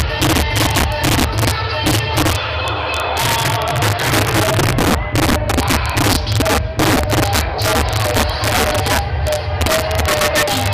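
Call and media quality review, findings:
Integer overflow, throughout the clip. Violent, sharp cracks on loud peaks, harsher than clipping. Probable component: a fixed-point gain or mixing stage driven about 4 dB past full scale. Mechanism: the sum exceeds the largest integer and wraps to the opposite sign instead of saturating. Around one sample in twenty is affected. Each one jumps across the full range.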